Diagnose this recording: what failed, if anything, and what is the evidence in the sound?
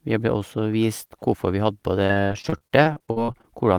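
The network path dropped or delayed packets repeatedly from 2.07 to 3.45 s, and the receiver's concealment patched each hole by stretching the last good sound. Well over a dozen short gaps fall in quick succession, the longest about 44 ms, with about 370 ms filled in and about 360 ms of the original speech lost. With roughly a quarter of that stretch synthesised, the speech turns choppy, with pieces missing: repeated packet loss with its typical robotic sound.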